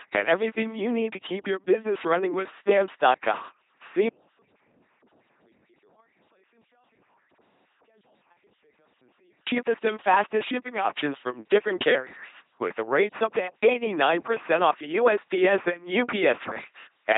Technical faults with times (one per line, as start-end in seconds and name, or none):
0.00-17.18 LPC-10 vocoder
15.64-17.13 periodic USB or driver dropouts